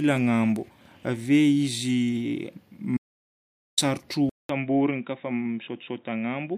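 A speech recording with two faults. From 2.97 to 3.78 s there is an audio dropout to silence: about 0.8 s of silence with no room tone, which separates it from a natural pause. The likely cause is a briefly lost input link. At 4.29 s the input switched to a poorer device, most likely another microphone or a headset's call profile. A gap of about 0.2 s is followed by sound with nothing above 3.8 kHz, a level drop of around 5 dB, and a new noise floor roughly 40 dB below the signal until the end. That fresh noise and level shift arriving together mark a device change rather than simple filtering.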